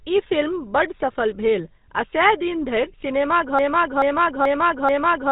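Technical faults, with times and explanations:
Throughout: GSM full-rate codec. The speech passes through a narrow telephone band with nothing above 4 kHz, and every voiced stretch has a plainly audible buzzy, gravelly grain. The codec rebuilds the voice from a vocal-tract model driven by a coarsely sampled pulse excitation, keeping only one excitation sample in three. The missing fine detail becomes that rasp. The overall character fits a 13 kbps GSM full-rate stream.
3.59 s to the end: broken-record loop. A 0.43 s fragment of speech repeats exactly, back to back, four times, and the clip ends while it is still cycling. The repeats are identical, so the speech that should have followed is absent. This points to a playback, encoding or streaming stage that most likely stalled and kept resending the last buffered fragment it held instead of new audio.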